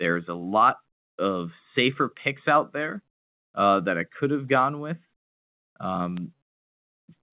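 At 0.49 s, just after "is a", and again at 6.17 s, a bit error spike gives a sharp tick. A flipped bit throws one sample, then a run of three, off by a power of two. On the waveform each shows as a needle, and on the spectrogram as a thin full-band vertical line.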